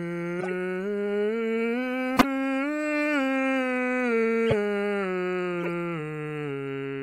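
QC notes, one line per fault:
0.39–0.52 s, 2.16–2.25 s, 4.46–4.54 s, 5.61–5.69 s: corrupt frame decoded. The decoder played damaged compressed frames, and misread gains and codes pushed energy into the wrong frequencies. Each event spans a few frames and sounds like a brief chirp or noise burst over the music, peaking around −10 to −20 dBFS.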